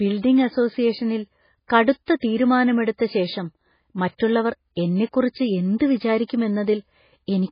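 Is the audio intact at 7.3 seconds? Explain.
No. MP3 compression damage spans the whole clip, including 7.3 s. A likely very low bitrate, around 16 kbps, switches weak frequency lines on and off and removes everything above 5 kHz, so the speech sounds heavily watery and swirly.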